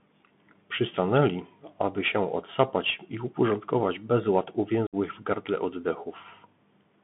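Bluetooth CVSD headset codec, throughout: the speech is squeezed into a telephone band of roughly 150 Hz to 3.5 kHz, and the one-bit, adaptive-step coding leaves a granular hiss beneath it, with s sounds turned scratchy and louder bright passages distorting where the step cannot keep pace.

Unconcealed Bluetooth headset packet loss, from 4.87 to 4.95 s: several voice packets between headset and phone never arrived, leaving about 60 ms of speech missing with nothing patched in. The hole opens and closes abruptly, and the speech returns briefly quieter.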